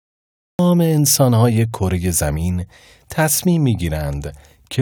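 A speech recording with a cut-off start: the first 0.59 s is digital silence, and the audio then begins at 0.59 s partway through a sound instead of rising from a natural onset. The capture or stream evidently started late, so the opening of that utterance was never recorded. On a waveform this shows as a flat line that jumps straight into the signal, and on a spectrogram as a blank region ending in an abrupt vertical edge.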